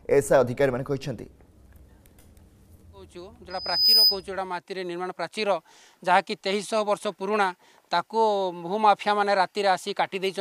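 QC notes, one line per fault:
3.50–4.24 s, loudspeaker feedback squeal: a single 5 kHz tone swells over roughly 0.4 s to about 10 dB above the programme, as the microphone-to-speaker loop exceeds unity gain there. A spectrogram shows one bright horizontal line thickening until cut; the waveform envelope balloons.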